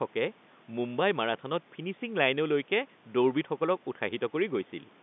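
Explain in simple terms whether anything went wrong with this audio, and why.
Nothing went wrong here: the speech has the narrow sound of an ordinary landline call, with the deepest bass and everything above about 3.6 kHz trimmed away, which is exactly how a normal telephone connection is expected to sound.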